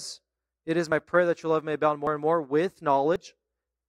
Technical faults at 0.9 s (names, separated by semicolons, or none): dropped buffer (overrun)